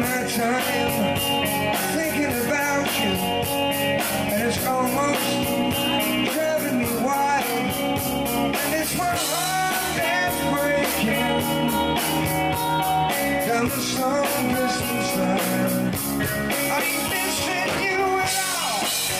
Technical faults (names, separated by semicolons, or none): none